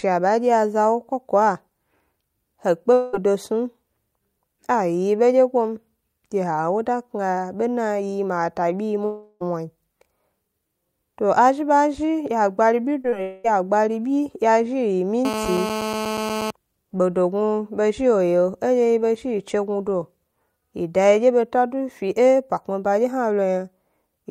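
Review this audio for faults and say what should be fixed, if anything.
Long network dropout at 2.93–3.15 s, 9.05–9.42 s and 13.22–13.46 s. The speech is replaced by a continuation of the last sound that decays into a fading buzz or hiss: about 0.2 s, 0.36 s and 0.22 s long. The middle one ends in roughly 10 ms of silence before the speech resumes, with the lost stretch gone. The likely cause is a run of packets that never arrived. It differs from short concealed loss by lasting tenths of a second, long enough for the fill to audibly decay. A larger jitter buffer and a more reliable network path would prevent it.

Short concealed packet loss at 13.02–13.06 s and 13.10–13.14 s, just before the third dropout. About 20 ms of audio was lost each time, and the decoder patched each hole by extending the preceding sound and blending back, leaving a brief smear or wobble. Unlike a long dropout, each gap is too short for the fill to fade into buzz or silence. 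Forward error correction or packet redundancy in the codec would prevent it.

GSM phone buzz from 15.25 to 16.51 s is a hard, raspy buzz at 217 Hz with many harmonics, only about 5 dB below the speech. It holds steady throughout, which fits a phone on an active call. A nearby 2G handset's transmit bursts are being rectified in the audio circuitry. Unlike mains hum at 50 or 60 Hz, its 217 Hz fundamental and gritty, pulse-like timbre give it away. Keeping phones away from microphones, cables and interfaces, or switching them off, prevents it.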